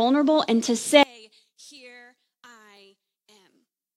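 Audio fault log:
1.03–3.97 s, one channel inverted: one stereo channel has likely flipped polarity, so when both channels are summed the shared centre content cancels. The speech falls by about 30 dB to a faint trace, leaving only the small difference between the channels.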